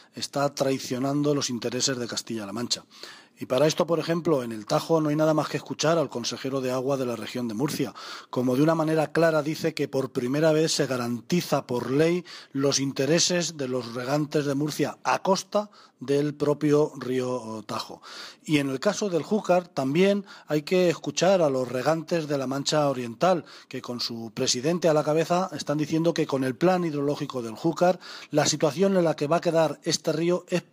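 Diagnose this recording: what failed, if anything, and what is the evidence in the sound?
Nothing failed: no stage in the chain, from capture through playback, leaves an audible fault anywhere in the recording.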